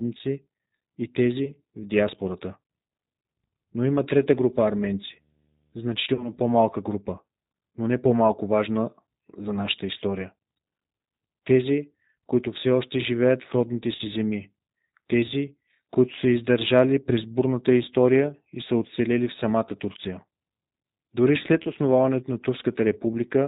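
Throughout, the G.729 codec at 8 kbit/s bandlimits the speech to below 4 kHz and leaves it rough and synthetic, unlike the smeared, swirling sound of transform codecs.

VoIP packet loss concealed by the speech codec first appears at 1.45–1.54 s. Roughly 20 ms of audio is missing, which fits one lost packet. The decoder extends the last pitch and filter into a fading buzzy tone or coloured noise that stays weak after the gap, rather than leaving silence or a click.

Right after "има трета", video or display buzz runs from 4.38 to 6.83 s at about −45 dB. The 75 Hz field-rate buzz with hash above it points to a display, since mains hum would sit at 50 or 60 Hz.

Further concealed packet losses fall at 6.15–6.29 s (about 40 ms lost) and at 10.86–10.88 s, after "важна за нашата история" (about 20 ms lost). Another falls at 13.95–14.02 s, between "още живеят в родните" and "земи тези които са" (about 40 ms lost). 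The last is at 21.63–21.70 s (about 20 ms lost).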